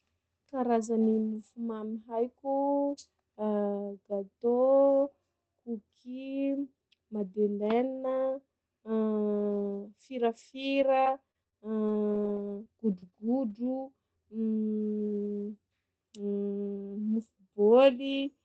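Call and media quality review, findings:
Scattered short gaps, 10.61–13.14 s: about seven brief ticks and smears, longest around 30 ms, from jitter buffer packet loss concealment extending the prior sound; waveform shows small repeated or smeared segments.

Lost packet rebuilt from error correction, 13.50 s, 13.64 s, 13.80 s: Opus in-band FEC frames, each 20 ms, sound rougher and noisier; spectrogram shows brief grainy patches below the codec's 8 kHz ceiling.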